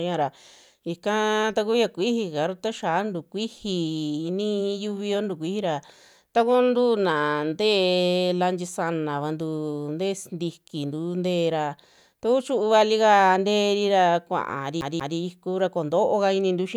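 At 14.81 s the speech catches in a CD stuck on one turn. A scratch sends the laser back, repeating the same 186 ms twice with brief mutes until 15.18 s.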